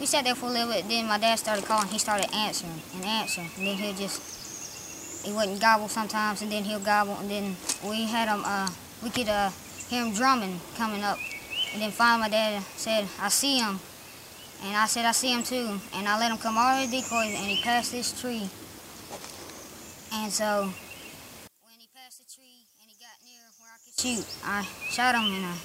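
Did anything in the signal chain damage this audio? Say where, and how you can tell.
Yes. From 21.47 s to 23.98 s the sound collapses by about 27 dB. That points to one channel inverted, likely from a polarity-reversed connection in the analogue wiring. With one side flipped, the material common to both channels cancels when they are combined to mono, so centred content and low end all but disappear. Only the small difference between the channels survives, which is why that stretch sounds faint rather than simply quieter.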